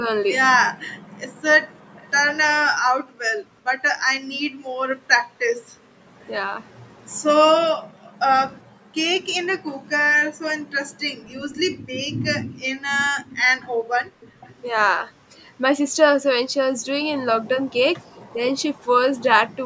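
From 0.00 to 0.07 s the sound dips by roughly 10 dB, and again at 4.30 to 4.34 s. This is speech suppressed in double talk, likely caused by the echo canceller turning the talker down while the far side was also speaking. On a waveform it shows as a brief notch in the envelope.

Between 0.99 and 8.25 s the background is gated by the echo canceller. It clamps the microphone while the loudspeaker plays, so the room sound drops by up to about 40 dB for around 1.5 s in total. A spectrogram shows these as dark gaps in the noise floor.

At 1.96 to 2.09 s an echo leak is heard. A faint copy of the sound returns about 400 ms late, around 30 dB below the speech, likely because the canceller failed to remove all of the loudspeaker pickup. It appears as a faint repeat of the speech pattern.

From 8.85 to 13.54 s the suppression is deeper, reaching roughly 25 dB across about a second.

From 13.6 to 14.54 s the echo leak returns at 439 ms delay. 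Within that stretch, from 13.82 to 14.41 s, the background gating cuts the room sound by about 22 dB.

A last echo runs from 18.05 to 18.84 s, at about 35 dB down. During it, at 18.34 to 18.38 s, a brief suppression of roughly 5 dB occurs. The spectrum ends at 8 kHz.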